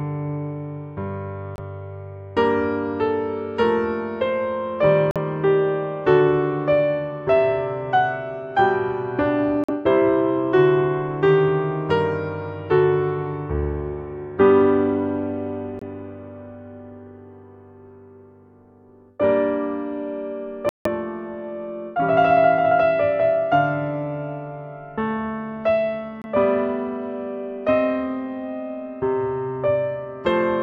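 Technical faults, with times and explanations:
1.56–1.59 s, 5.11–5.17 s, 9.64–9.69 s, 15.79–15.83 s, 20.69–20.87 s, 26.22–26.25 s, Bluetooth dropout: audio packets likely missed the headphones' deadline and were discarded, so the sound cuts to silence, then resumes further along as though it had kept playing. The gaps are about 23, 46, 46, 23, 163 and 23 ms, consistent with one, two or seven lost codec frames.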